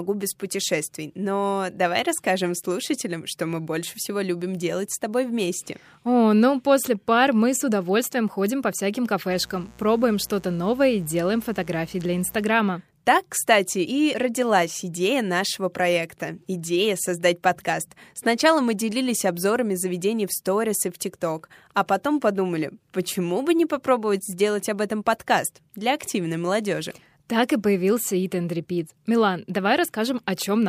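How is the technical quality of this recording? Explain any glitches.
The recording has one clear technical fault, a burst of mains buzz.

Mains buzz runs from 9.28 to 12.46 s, starting just after "удовольствием ходим по всяким". Sharp switching spikes, from something like a dimmer, a rectifier or an unshielded lead, leak into the signal twice per 60 Hz cycle. This creates a comb of 60 Hz harmonics stretching up into the kilohertz range. The result is a steady, raspy buzz sitting roughly 25 dB below the speech for about three seconds.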